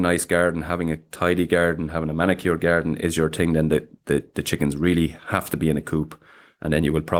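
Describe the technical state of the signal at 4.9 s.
At 4.9 s the signal is affected by clock drift between sender and receiver, present through the whole clip. The sender's clock runs roughly 4 percent fast, so the receiver's jitter buffer keeps filling and must shed audio to stay in step, giving a faintly uneven pace.

That 4.9 s point falls inside a run of repeated timing corrections lasting from 0.27 s to 6.94 s, with playback at 104 percent speed. The receiver keeps cutting short pieces of speech at irregular spacing, always in the same direction, heard, if at all, as slight hiccups or an unsteady tempo.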